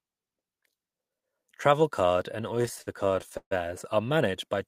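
A speech clip that drags and stutters between 2.55 and 3.53 s, with repeated stalls (stutter): seventeen brief hold-ups, the longest 138 ms, stretch the sound by 340 ms overall, filling roughly a third of that stretch, while nothing is actually lost. Packets arrived late or too slowly, so the jitter buffer kept emptying and the receiver extended the last sound until it could continue.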